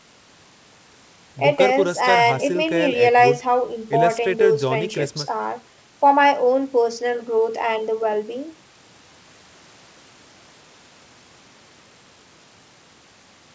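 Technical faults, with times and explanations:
No technical faults are present, so there are no times or explanations to give.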